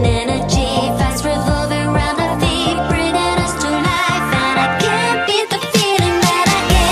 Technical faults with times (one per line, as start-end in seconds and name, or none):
none